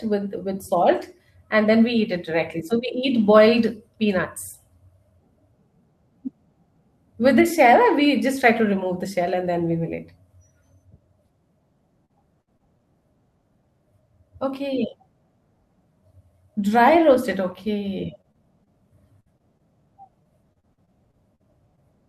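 From 12.05 to 12.81 s the speech turns choppy and robotic. This is repeated packet loss: four holes, the longest about 55 ms, each patched by stretching the last sound, with pieces audibly missing. The same happens again from 18.21 to 19.61 s (six holes, longest 57 ms) and from 20.23 to 21.79 s (eight holes, longest 44 ms).

At 17.13, 17.31 and 17.51 s a lost packet is rebuilt from error correction. A low-bitrate copy carried in the following packet fills each 20 ms slot, so there is no hole or robotic smearing, only a brief rougher, noisier patch.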